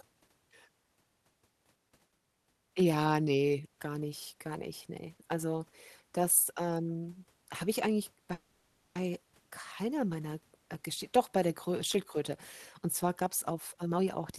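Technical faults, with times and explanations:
8.33–8.97 s, call audio freeze: the sound stalls into a fading buzz for about 0.62 s, likely from delayed packets emptying the jitter buffer; spectrogram shows smeared, decaying bands.
13.21–14.33 s, jitter buffer speed-up: speech runs about 126% fast at unchanged pitch, roughly 0.3 s trimmed as tiny pitch-period cuts; waveform cycles keep their length.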